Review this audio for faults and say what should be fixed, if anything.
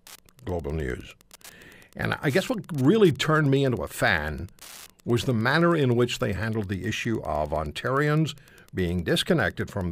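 Wi-Fi interference runs through the whole clip as a steady ticking at a 102.4 ms period, roughly ten ticks a second, sitting well below the speech. A nearby Wi-Fi radio's beacon is being rectified by the audio circuit. Move the radio away from the audio wiring and use shielded, balanced cables with RF filtering at the inputs.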